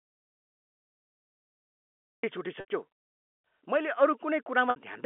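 From the very start until 2.24 s, the audio is dead silent, with no room tone. This is an audio dropout to silence, likely from lost input while recording continued. At 2.60 s and 4.70 s, packet loss with pitch repetition appears. About 80 ms, then 60 ms, went missing, which fits four and three lost packets. The receiver repeated the last pitch period, which faded into silence before the speech returned with a short cross-fade over the narrow telephone band.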